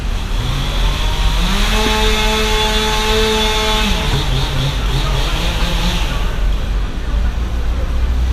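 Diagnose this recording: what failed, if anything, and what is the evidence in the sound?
The failure sits at the codec stage: compressed frames were skipped during decoding, either missing from the file or rejected as damaged. The sound jumps forward at 1.86, 4.13, 5.60 and 7.24 s, losing roughly a tenth of a second each time, with one of the jumps nearer 150 ms and one nearer 70 ms. Each lost stretch fits a whole number of 10 ms frames. Unlike a dropout there is no silent gap.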